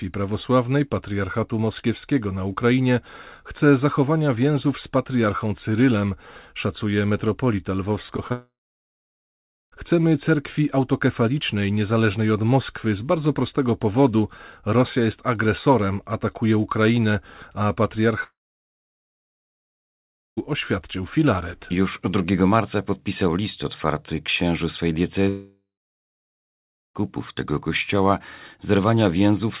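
At 8.06, 8.17 and 8.28 s, three short concealed packet losses smear the speech. Each gap is about 20 ms. The receiver filled each one by extending the last sound, then blended back. Each is a brief wobble.

From 8.32 to 9.74 s the speech stops. A fading buzz continues the last sound, then about 1.2 s of near-silence follows. The same happens from 18.24 to 20.39 s, with about 2.05 s silent, and from 25.29 to 27.02 s, with about 1.3 s silent. Each time the speech resumes further on, with the middle missing. The likely cause is a long network dropout. Throughout, nothing sounds above 4 kHz, which fits the 64 kbps G.711 mu-law call codec.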